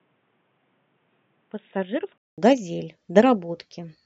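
From 0 to 2.38 s the speech sounds dull and quieter, likely an input switched to a poorer device; the spectrogram shows nothing above 3.8 kHz, then a 200 ms silent gap.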